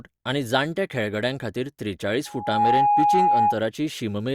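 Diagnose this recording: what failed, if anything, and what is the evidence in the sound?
Loudspeaker feedback squeal from 2.25 s to 3.59 s. A steady tone at 828 Hz swells out of the speech over a little under half a second, then holds well above it, roughly 10 dB louder, until it stops at 3.59 s. The fault sits in the acoustic loop between playback and capture: the microphone is hearing the loudspeaker it drives, and at 828 Hz the round-trip gain has passed unity, so that frequency keeps reinforcing itself.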